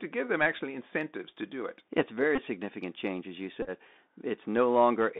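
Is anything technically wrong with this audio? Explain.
Yes, two faults are audible in this speech.

Throughout, the Bluetooth CVSD headset codec narrows the sound to roughly 200 Hz to 3.7 kHz, which fits a 64 kbps one-bit delta stream. The adaptive step can't keep up with fast, loud high content, so sibilants turn scratchy over a granular hiss. A spectrogram shows a hard ceiling near 3.7 kHz with a speckled noise floor.

At 2.36 to 2.39 s, and again at 3.62 to 3.70 s, there are Bluetooth headset packet repeats. The link dropped voice packets, about five in the first event and ten in the second, and the decoder replayed the previous packet's bits. Repeating every 3.75 ms produces a brief buzz near 267 Hz, lasting up to about 30 ms in the second event. The waveform shows short periodic copies, and the spectrogram shows harmonic stripes at 267 Hz spacing.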